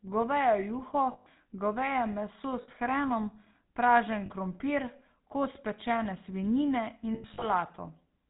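GSM full-rate codec damage runs through the whole of this speech clip: the codec rebuilds the voice from a vocal-tract model driven by a sparse, regularly spaced pulse train, so the sound is plainly buzzy and gravelly. Nothing above 4 kHz survives, which fits the 13 kbps full-rate coder. Lost GSM frames also occur at 1.12–1.27 s, just before "goveje meso"; at 2.62–2.69 s, between "goveje meso" and "hrenom pražen krompir"; at 4.26–4.31 s; and at 7.14–7.47 s, just after "pečene svinjine". These gaps last 140, 60, 40 and 180 ms. The last one is scattered over 280 ms, with its longest run about a tenth of a second. In each gap the decoder keeps reusing the last good frame's settings, so the sound hangs on as a rough, metallic ring rather than dropping out cleanly.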